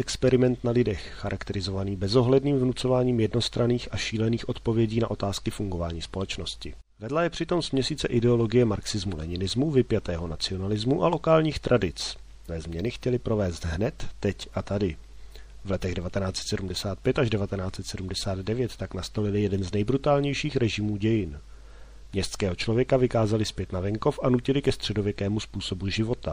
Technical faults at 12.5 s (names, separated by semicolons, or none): MP3 compression; damaged data in a compressed stream